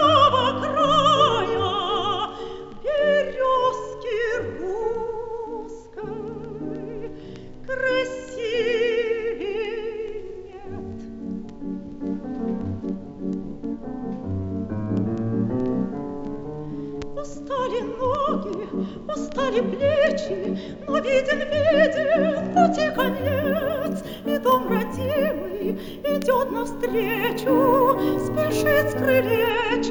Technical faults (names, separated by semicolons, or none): imaging from sample-and-hold upsampling